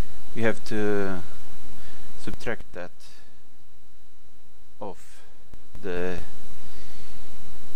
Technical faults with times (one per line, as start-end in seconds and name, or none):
2.27-2.77 zipper noise
5.43-6.23 zipper noise